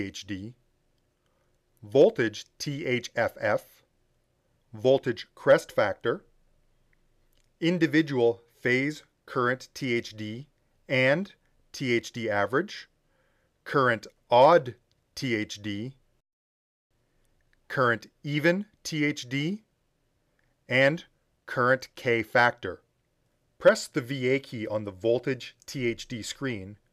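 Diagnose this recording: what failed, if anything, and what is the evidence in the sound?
Nothing here points to a failure at any stage, and there's no fault to trace.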